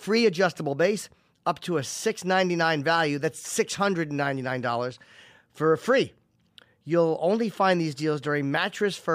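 Sample clock jitter runs from the start of the speech to 4.26 s. The converter's clock wandered by roughly a microsecond and a half, so each sample was captured a little early or late. Because the resulting error scales with how steeply the waveform is changing, it sits around 35 dB below the signal and follows it: a fine hiss and grain that thicken on loud, bright passages and disappear in the pauses.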